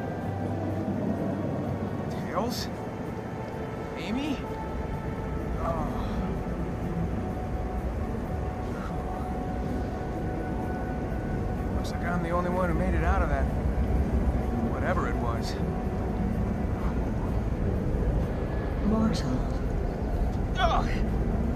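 Nothing in this recording jumps out as a technical fault: no dropouts, glitches or distortion to point to at any moment.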